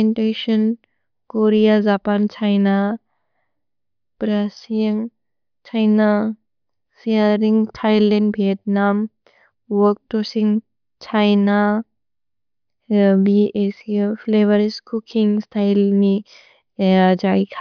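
No technical faults detected anywhere in this speech recording.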